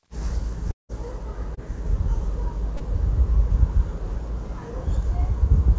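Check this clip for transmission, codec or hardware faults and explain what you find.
Three transmission faults stand out: one long network dropout and two short concealed packet losses, heard over a call path whose G.722 coding leaves nothing above 8 kHz.

From 0.71 to 0.92 s there is a long network dropout, likely caused by a stretch of packets never arriving. The receiver extends the last sound for a while, fading it into a decaying buzz or hiss before about 0.15 s of near-silence. Then the audio resumes further along, with roughly 0.18 s simply gone. The gap and the jump in content distinguish it from a brief concealed loss, where the sound carries on without a break.

At 1.55 to 1.60 s and again at 2.77 to 2.83 s there is short concealed packet loss. About 30 ms failed to reach the decoder in time each time, and the receiver bridged the hole by continuing the preceding sound, then crossfading back into the real signal. 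Each one comes through as a quick smear or wobble rather than a hard click, and no silence appears, which is what sets these apart from the longer dropout.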